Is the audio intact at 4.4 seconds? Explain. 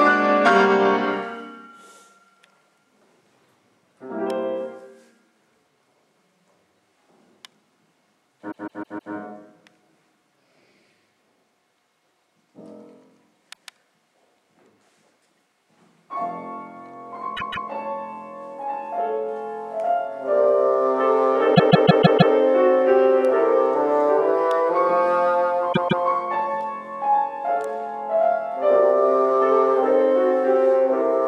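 Yes, the audio is intact at 4.4 seconds, with no dropout, click, distortion or other fault audible at that moment.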